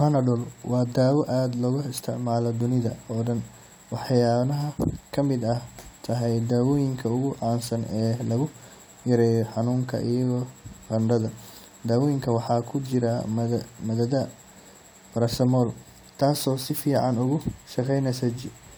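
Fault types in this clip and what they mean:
Crude rate conversion: a gritty, inharmonic fizz rides on the speech throughout, roughly 25 dB below it. This fits a 44.1 kHz to 48 kHz change made by repeating nearest samples with no filter. A spectrogram shows faint stray tones unrelated to the voice harmonics, and the waveform shows tiny periodic steps.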